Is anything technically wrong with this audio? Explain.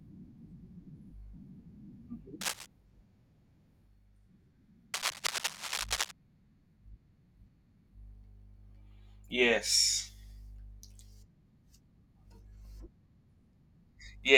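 Yes, cable scratch noise breaks into the speech twice, from 2.41 to 2.66 s and again from 4.94 to 6.11 s. Both sound like scratching and rustling about as loud as the speech. This is likely a worn cable or connector being moved, its contact resistance jumping so that dense, irregular bursts of noise ride on the signal. A spectrogram would show ragged broadband smears across those spans, and the waveform would show jagged, uneven spikes there.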